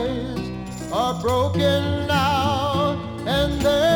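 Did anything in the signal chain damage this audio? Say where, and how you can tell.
No, nothing in the chain from capture through to playback has left an audible mark on this audio.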